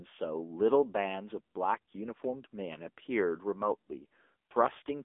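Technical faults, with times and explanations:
Throughout, AMR narrowband mobile codec: the speech is confined to a telephone band of roughly 250 Hz to 3.5 kHz, with nothing above 3.6 kHz, and carries a plainly audible buzzy, synthetic edge. The codec rebuilds each 20 ms frame from a vocal-tract model fed by sparse pulses. The coarseness points to a low bitrate near 8 kbps. Unlike a simple band-pass filter, which narrows the sound but leaves it natural, this adds that artificial, pulse-driven buzz.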